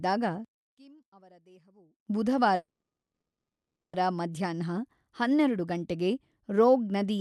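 From 0.45 to 2.07 s, one stereo channel was likely wired or processed with reversed polarity, so one channel inverted against the other. On a mono sum the centred speech cancels almost entirely, dropping by about 29 dB. What survives is only the small difference between the channels, a faint trace of the voice rather than the voice itself.

From 2.55 to 3.95 s comes a call audio freeze. Packets were likely held up in transit and the jitter buffer ran dry. The receiver filled about 1.38 s: first a short fading continuation of the last sound, then roughly 1.1 s of silence. When the packets arrived, playback resumed where it had stopped. Nothing is lost, but everything after that point now runs about 1.38 s late. The call path limits the band to roughly 12 kHz throughout.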